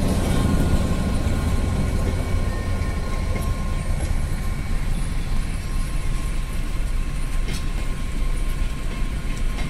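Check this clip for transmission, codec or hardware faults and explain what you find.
The compressed stream behind this clip has damaged data, at four points: 0.44, 2.49, 5.37 and 7.78 s. At each one, part of the encoded data was lost or corrupted, so the decoder could not read those frames correctly, lost its sync and had to search for the next valid frame header before decoding resumed. Each event is a brief disruption in the sound, a chirp, squawk, click or short gap, where the corrupted frames interrupt the otherwise continuous audio.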